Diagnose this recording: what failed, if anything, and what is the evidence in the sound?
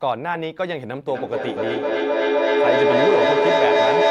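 Feedback echo between two devices, a call-processing failure, starts at 1.08 s and runs to the end. Speech returns roughly every third of a second, thinner and ringing, and builds to about 5 dB above the direct speech. A spectrogram shows stacked, evenly spaced repeats that grow instead of fading.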